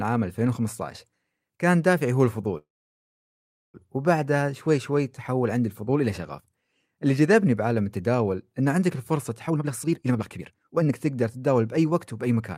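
From 2.57 s to 3.76 s there is a call audio freeze. Packets were likely held up in transit, so the jitter buffer ran dry and the receiver had nothing new to play. It stretched the last sound briefly before falling silent for about 1.08 s of the 1.16 s gap. When audio resumes, it picks up exactly where it stopped, with nothing lost, but everything afterward now runs 1.16 s later.

From 9.47 s to 12.54 s comes a jitter buffer speed-up. The buffer was holding more audio than its target, so the receiver trimmed it by repeatedly cutting out short pitch-period-length slices. Roughly a second of audio was removed in total. The speech plays at about 137% speed with its pitch unchanged, so it sounds noticeably hurried and compressed rather than higher.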